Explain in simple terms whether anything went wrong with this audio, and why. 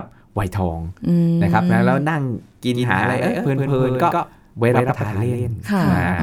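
Something did go wrong, starting at about 2.75 s and running right to the end. That's a doubled audio track: the speech suddenly gets a second copy of itself, trailing about a tenth of a second behind and a little quieter than the original. It snaps in with no fade and has no roomy tail, so it sounds like a flat slapback. The likely cause is the same sound being picked up twice, once through a slower route.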